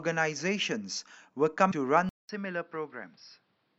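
At 1.69 to 1.73 s, damaged data in a compressed stream leaves the decoder unable to read the frames there. It loses sync and hunts for the next valid header, producing a brief glitch in the speech.

From 2.09 s to the end, the recording likely switched input to a poorer device. A 0.2 s silence marks the change, and then the speech becomes duller and boxier, with nothing above 5.6 kHz, a level about 5 dB lower and a faint new background noise.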